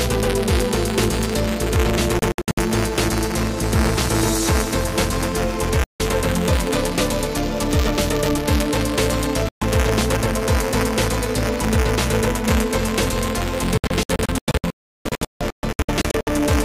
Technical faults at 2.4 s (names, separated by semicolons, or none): buffer tearing; digital broadcast dropout